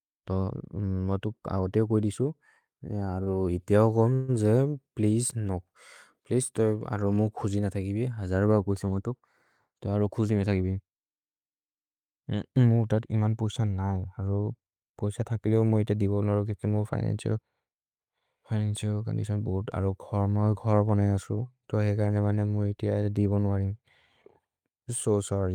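At 3.23 to 3.29 s there's a short stall from a late packet: the speech hangs on one sound for about 31 ms while the receiver waits, then carries on with nothing lost.

Right after, at 4.15 to 4.36 s, just before "जे प्लेअसे नो", comes a call audio freeze. The last sound stretches into a fading buzz for roughly 137 ms without dropping to silence, likely because packets were held up in transit.

Then there are two jitter buffer speed-ups. At 15.32 to 15.63 s, leading into "मुअ इते दिबोन् नरो", the audio runs at 113% speed. At 20.53 to 21.02 s it runs at 112%. Both times tiny pitch-period slices get trimmed, about 50 ms and 70 ms in total, so the speech sounds hurried while the pitch stays the same.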